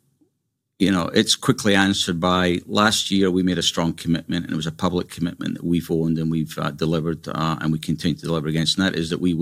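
No faults turn up anywhere in the recording: no dropouts, clicks, distortion or timing errors.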